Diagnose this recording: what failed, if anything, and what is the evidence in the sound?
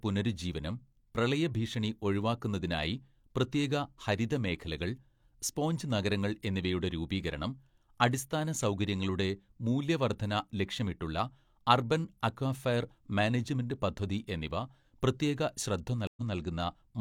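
A stream reconnect occurred at the network stage between 16.07 and 16.35 s: about 96 ms of silence, then a fresh decoder resumes the speech 186 ms earlier, repeating a short stretch. A waveform shows a flat gap, then a soft restart and a spectrogram shows a blank band followed by repeated patterns.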